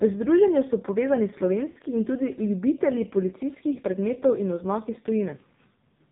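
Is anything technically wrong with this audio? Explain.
Yes. The whole clip carries heavy AMR narrowband mobile codec damage. The speech sits in an 8 kHz sampled band, so nothing above 4 kHz survives. The coder rebuilds the voice from a vocal tract model fed by sparse pulses. At this low rate, which fits the 5.9 kbps mode, the voice sounds buzzy and synthetic. Consonants lose their edge and the tone feels boxed in.

There are also lost AMR speech frames. At 1.70 s, after "združenju so povezani", about 60 ms drops out. The decoder repeats the last good pitch and filter settings at falling gain, so the sound smears and sags before "in tudi ljubitelji" returns rough. At 3.74 s, just before "predmetov in oznak iz", a single 20 ms frame is lost. That gives a brief dip or warble.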